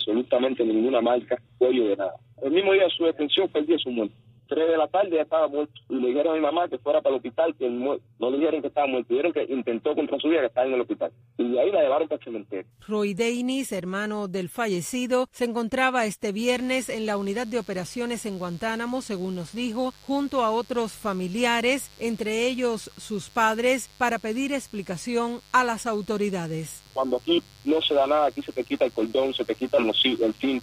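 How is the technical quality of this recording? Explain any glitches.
The recording's quality is compromised by mains buzz starting at 16.39 s and continuing to the end. From that point a steady, raspy buzz sits well below the main sound, at about 30 dB down. Its fundamental is 50 Hz, but what sets it apart from a plain mains hum is its edge. Something like a dimmer, rectifier or unshielded lead is injecting sharp switching spikes twice per cycle, spreading harmonics up into the kilohertz range instead of staying as a smooth low tone.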